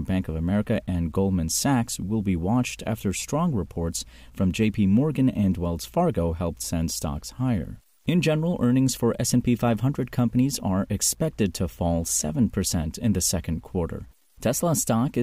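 Throughout the speech, low bit depth without dither adds grainy distortion that tracks the signal, roughly 45 dB below it, so quiet tails turn gritty. Truncation to about 9 bits is the likely cause. Zoomed waveforms show staircase steps, and spectrograms show broadband grit only where sound is present.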